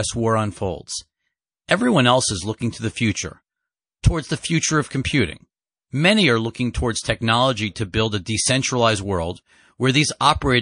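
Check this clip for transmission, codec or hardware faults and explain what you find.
One fault runs through the whole clip: MP3 compression damage that is plainly audible. The speech has a watery, swirling quality. Sibilants turn into metallic chirps. The likely cause is an MP3 encode at a low bitrate, one that fits roughly 40 kbps. Starved of bits, the encoder drops weak frequency lines, which flicker frame to frame. That flicker is the tell: a plain low-pass filter dulls the highs without the shifting, bubbly texture.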